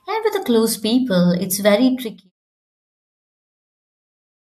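No audible technical faults turn up in this speech clip.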